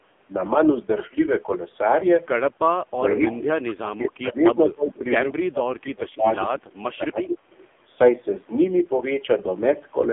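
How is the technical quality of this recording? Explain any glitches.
Quality is poor throughout, with one brief dropout in the speech.

AMR narrowband mobile codec, whole clip: nothing passes above 3.6 kHz, and the low bitrate, fitting about 5.9 kbps, leaves speech buzzy and synthetic, unlike a plain band-limit filter.

Speech suppressed in double talk, 6.49 to 6.79 s: the voice dips by around 25 dB, likely an echo canceller muting the talker during overlap, rather than a clean packet gap.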